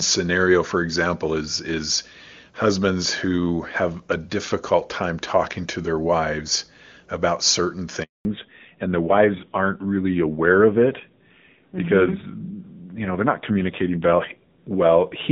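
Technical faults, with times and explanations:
8.03–8.25 s, handover gap: Right after "their wives about certain" the sound fades out within a few tens of milliseconds and stays silent for 220 ms. No speech frames reached the receiver while the call switched networks, so whatever was spoken in that stretch is gone.
8.25 s to the end, fallback to narrowband: From the same point, everything above 4 kHz disappears, and the speech turns dull and somewhat rough compared with the clear wideband sound before the gap. That change fits the link dropping from HD Voice to a low-rate narrowband codec, around 7.4 kbit/s AMR-NB.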